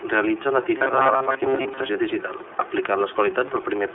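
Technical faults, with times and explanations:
Throughout, iLBC codec: the speech has passed through a narrowband VoIP coder working in 30 ms frames, each frame's excitation coded on its own without drawing on the previous one. At a rate that fits 13.33 kbps, and over a line band of roughly 300 Hz to 3.5 kHz, everything above that is gone, leaving the voice boxed and thin. The low-rate coding adds a plainly audible rough, slightly synthetic graininess to the speech.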